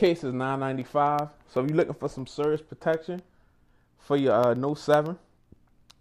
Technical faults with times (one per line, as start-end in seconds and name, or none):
0.06-5.94 periodic USB or driver dropouts